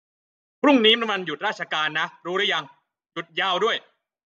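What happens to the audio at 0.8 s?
At 0.8 s the level is being pulled down in unsmoothed steps, producing zipper noise from 0.73 to 1.11 s. Instead of gliding, the gain drops in jumps of about 1 dB, around twenty times a second, for a total fall of roughly 10 dB. Each jump cuts the waveform abruptly and leaves a tiny click, so the speech carries a fast ticking, zipping texture for as long as the level is moving.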